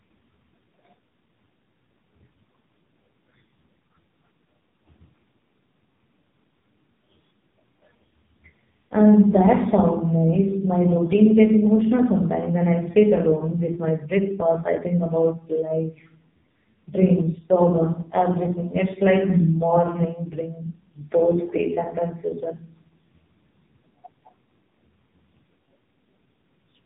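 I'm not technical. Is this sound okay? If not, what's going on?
No. The whole recording has AMR narrowband mobile codec damage. Nothing above 3.8 kHz survives, so the speech sounds muffled, buzzy and synthetic, like an old phone call.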